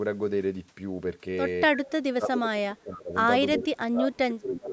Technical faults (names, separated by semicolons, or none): echo leak; speech suppressed in double talk